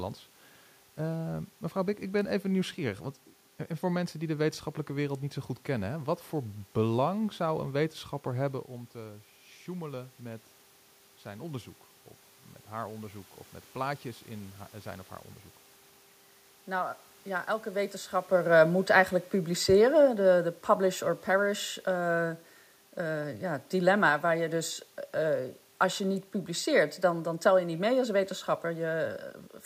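A speech recording in which, from 18.34 s to 28.08 s, the level sinks steadily by about 6 dB, and the room noise sinks with it rather than staying put. That shared drop is the mark of automatic gain falling: the gain control judged the input too loud or its background noise too strong and wound its gain down gradually over those ten seconds. The level changes near 8.5 s and 18 s sound instead like the talker moving relative to the microphone.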